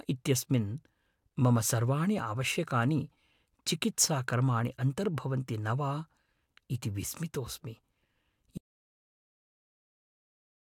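The input signal was likely lost at about 8.58 s, through a disconnected device, a failed link or a mute, while the recorder kept writing silence, which makes an audio dropout to silence in this speech clip. The speech cuts off mid-flow and never returns. The last two seconds, to the end of the clip, are silent with no room tone. Whatever was said during that stretch is missing from the recording.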